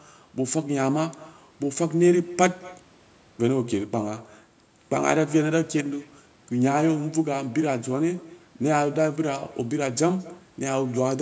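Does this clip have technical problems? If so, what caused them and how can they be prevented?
Yes. An echo with no canceller runs through the whole clip. A thin copy of the speech returns about a fifth of a second later, at about 21 dB below it. Preventing it means having the far end use headphones or enable acoustic echo cancellation.

From 5.81 to 5.86 s, one channel drops out, likely through a momentary stereo channel loss before the mono sum. The level falls about 6 dB instead of going silent as a full dropout would. Preventing it means securing the stereo connection or capturing in mono at the source.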